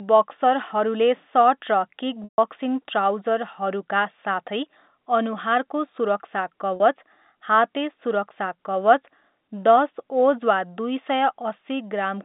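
At 2.24 s the audio drops out for about 140 ms. This is packet loss with pitch repetition. The receiver bridges the gap by repeating the last pitch period. The repeat fades out over about 50 ms, leaving silence until 2.38 s. The sound then returns through a short cross-fade. At 6.76 s a second, 40 ms loss is fully covered by the repeat. It sounds like a briefly held, buzzy tone. Both gaps fit 20 ms packets on the band-limited telephone line.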